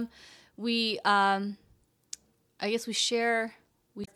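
Near the very end, from 4.01 to 4.08 s, the speech breaks into a brief glitch lasting about 66 ms. This is damaged data in a compressed stream. Some bytes in the encoded file were lost or corrupted at that point. The decoder could not read those frames correctly and lost sync. It then had to hunt for the next valid frame header. The garbled output while it searched is the glitch heard there.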